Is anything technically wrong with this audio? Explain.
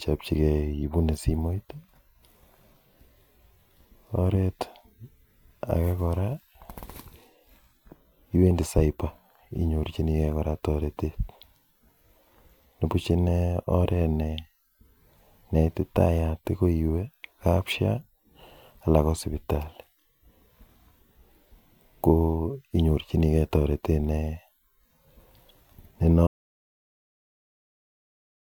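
Yes. At 26.27 s the speech is cut off abruptly, mid-flow, and from there to the end, about 2.3 s, there is an audio dropout to silence. The most likely cause is an input that was lost, through a disconnected device, a broken link or an accidental mute, while recording carried on writing silence. Unlike a natural pause or a noise gate closing, the gap holds no room tone at all. It is dead silence.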